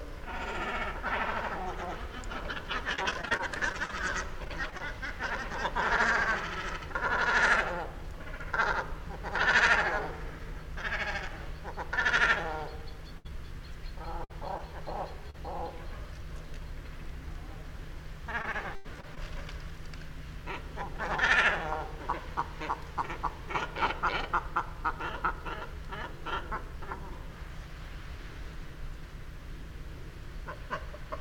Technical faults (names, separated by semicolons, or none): repeated packet loss (robotic sound); burst of packet loss; short concealed packet loss